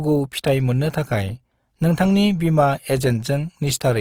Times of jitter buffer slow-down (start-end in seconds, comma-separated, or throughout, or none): none